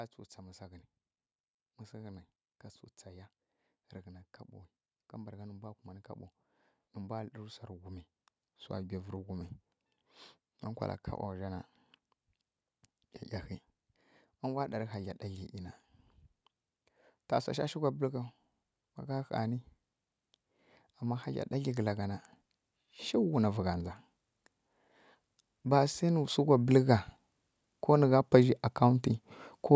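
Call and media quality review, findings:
Automatic gain rising, twice: 20.86–23.83 s, level creeps up by about 5 dB; 25.64–29.11 s, about 6 dB. Voice and room noise swell together over several seconds, so the AGC thought the input was too quiet and kept nudging gain up. Call mic processing tops out around 8 kHz.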